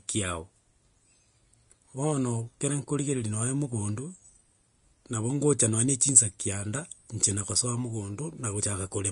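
From start to finish the speech carries plainly audible codec damage, most likely Vorbis compression at a low setting, which fits a bitrate around 34 kbps. Nothing survives above 10.5 kHz, and the treble just below that edge has turned into grainy hiss of similar energy, roughening tones and softening consonant attacks. Unlike a simple low-pass filter, the remaining top end is noisy rather than merely dull. Unlike steady background hiss, the grain follows the signal.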